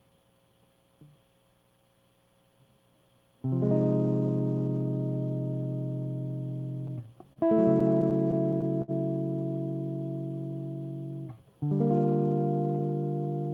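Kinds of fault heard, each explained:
Short stall from a late packet: At about 7.33 s one packet arrives late and the jitter buffer empties. The receiver holds the last bit of music for about 29 ms, then resumes where it stopped. Nothing is lost, but the playback falls that much behind.
Repeated stalls (stutter): From 7.80 to 8.91 s, packets keep arriving late, so the buffer runs dry seven times. Each gap is filled by stretching the preceding sound, the longest lasting 60 ms. That totals 120 ms of filled audio. The music drags and stutters without dropping anything.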